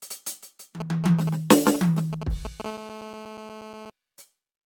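Generation loss runs through the whole music clip: the sound is swirly, smeared and hollow, attacks blur, and nothing survives above 17 kHz, which fits likely repeated AAC-LC encoding at about 96 kbit/s, perhaps four passes, each re-quantising on a shifted frame grid so noise and spectral holes pile up. GSM signalling bursts appear from 0.80 to 2.62 s: a galloping dit-dit-dit of brief 217 Hz buzzes, roughly 10 dB below the music, as a nearby 2G phone sends short groups of radio bursts that the audio circuit rectifies. GSM phone buzz follows from 2.65 to 3.90 s: a steady, hard, raspy 217 Hz buzz rich in harmonics, about 15 dB below the music and unrelated to it, because a 2G phone in a call transmits 217 times a second and the circuit demodulates those pulses.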